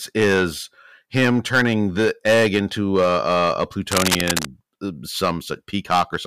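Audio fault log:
Throughout: hard clipping. The speech is driven about 11 dB past what the stage can pass, so around 3 percent of samples are sheared flat, giving harsh fuzz on loud syllables; the waveform shows squared-off peaks, the spectrogram broadband harmonic smearing.
3.91–4.47 s: cable scratch noise. Dense, uneven crackling bursts sit at roughly the same level as the speech, most likely a worn cable or connector being moved; the waveform shows jagged spikes, the spectrogram scattered vertical broadband streaks.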